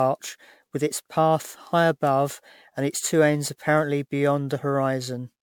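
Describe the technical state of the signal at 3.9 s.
At 3.9 s the speech carries generation loss, present throughout the clip: swirly, hollow and smeared, with blurred attacks, likely from around seven MP3 re-encodes near 128 kbit/s.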